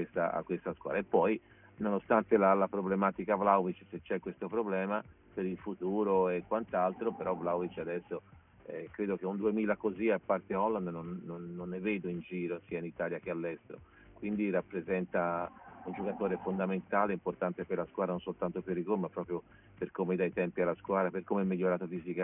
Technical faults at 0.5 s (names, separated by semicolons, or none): aliasing